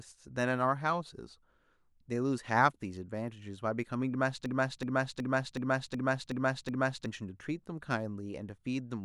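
From 4.46 to 7.06 s, a system hang loop stutters one 0.37 s chunk seven times. The waveform shows identical tiled blocks, which fits a 16384-sample buffer.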